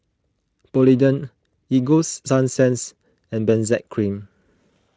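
No technical faults are audible.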